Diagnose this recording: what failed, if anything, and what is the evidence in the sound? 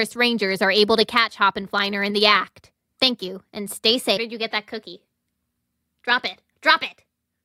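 At 4.16 s the speech jumps abruptly: right after "you and stay" a brief blip lands and the audio resumes with "did you", with no silence or fade between them. The likely cause is a stream segment skipped at the network or playback stage, where one chunk of a segmented stream failed to load and the player moved straight on to the next. A dropout or buffer underrun would leave a gap or stutter on the same timeline; here the material simply leaps forward.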